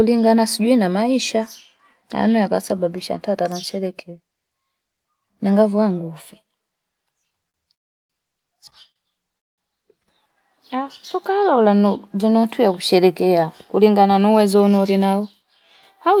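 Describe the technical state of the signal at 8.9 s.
At 8.92 to 8.98 s there is a short stall from a late packet: the jitter buffer ran dry, and the last sound was stretched by about 40 ms until the data arrived. Unlike a lost packet, nothing is skipped. The speech resumes where it stopped, just 40 ms later.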